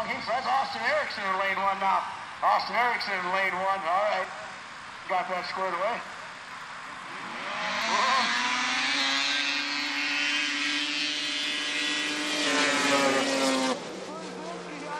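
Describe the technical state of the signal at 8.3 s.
At 8.3 s there's a drift correction step (7.82 to 8.99 s). Playback runs 6.2% fast and 104 cents sharp, likely from clock-sync software adjusting its buffer, then snaps back.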